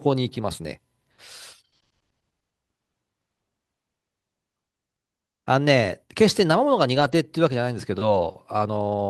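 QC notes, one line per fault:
6.95–7.13 s, lost packet rebuilt from error correction: a brief stretch of speech turns rougher and noisier with no dropout, because the decoder played low-bitrate copies carried in the following packets. About 100 ms was rebuilt, which fits several lost 20 ms packets.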